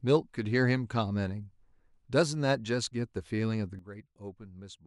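A speech recording with a sudden gain jump at 3.79 s: level and background noise drop together by about 12 dB to the end, likely a gain change applied without a ramp.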